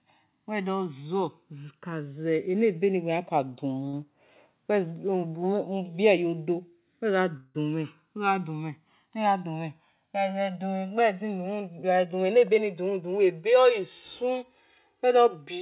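Throughout the speech, the two channels drift apart: their devices run on separate clocks about 200 ppm apart, so the inter-channel delay creeps up to roughly 3 ms by the end. Summed to mono, comb notches sweep slowly through the band, heard as slow flanging.

At 3.88 s there is a short stall from a late packet. The jitter buffer ran dry, so the receiver held the last sound for about 50 ms until the packet arrived, then resumed in place. Nothing is lost, but one sound lingers with a faint buzz or dip.

From 7.37 to 7.58 s comes a call audio freeze, likely from packets held up in transit that emptied the buffer. The final sound is stretched into a fading buzz or hiss lasting about 175 ms before the audio picks up where it stopped, leaving an inserted gap.

Between 11.76 and 13.2 s the jitter buffer speeds up. It had built up excess audio and trimmed roughly 150 ms by repeatedly cutting out pitch-period-sized slivers. 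Playback runs at about 109% speed with unchanged pitch and sounds hurried.

All of this is heard through narrowband call audio, with nothing above 4 kHz, which fits G.711 mu-law at 64 kbps.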